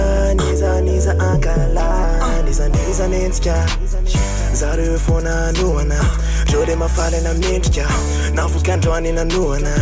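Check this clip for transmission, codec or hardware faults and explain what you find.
Nothing in the clip points to a transmission, codec or hardware problem. The sound holds steady throughout, with no breaks, glitches or changes in character to report.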